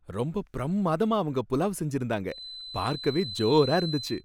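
A feedback whistle starts at 2.25 s, just after "ரொம்ப பிரம்மாதமா அவங்க புலாவ்", and continues to the end of the clip. A thin, steady tone at 4 kHz sits about 10 dB below the speech, swelling and fading slowly in level. The likely cause is a loudspeaker-to-microphone loop balanced right at the edge of feedback, so that one high frequency keeps recirculating and sustaining itself without building into a full howl.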